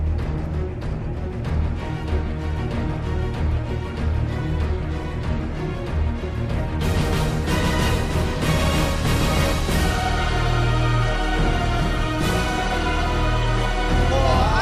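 No technical fault can be heard anywhere in this audio. Nothing in the recording, transmission or playback chain leaves an audible mark on the sound.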